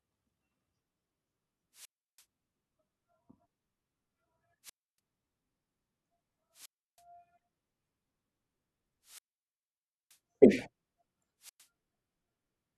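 Five times the speech thins into a quick swell of hiss, drops into near silence, then comes back: at 1.73 to 2.25 s (muted about 0.33 s), 4.63 to 4.99 s (0.29 s), 6.53 to 7.03 s (0.33 s), 9.03 to 10.19 s (the longest hole, 0.92 s) and 11.40 to 11.67 s (0.11 s). These are wireless microphone squelch dropouts. Each time the radio link from the microphone weakens, the receiver's squelch shuts the output off until the signal recovers.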